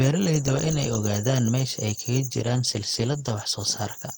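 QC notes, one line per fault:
2.32 to 4.18 s, call bitrate drop: the encoder's rate falls from 40 to 15 kbps and stays at its lowest for 1.02 s, so the speech is coded coarsely and sounds rough and muffled. On a spectrogram the upper band is cut away and the harmonics look smeared and blotchy.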